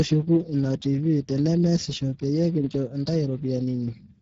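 From start to finish the speech carries plainly audible Speex codec damage. The CELP coder has too few bits for the excitation, so voices come out hoarse and noisy, consistent with a rate near 10 kbps. On a spectrogram, harmonics look smeared and grainy instead of cleanly striated, and energy stops sharply at 7.7 kHz. The waveform looks rough within voiced stretches.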